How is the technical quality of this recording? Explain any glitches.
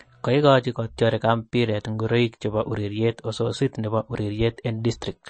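The recording is plainly degraded by compression. MP3 compression, throughout: a likely bit-starved encoder, consistent with roughly 35 kbps, removes everything above 8.4 kHz and drops weak frequency lines, so the speech sounds dull, watery and swirly.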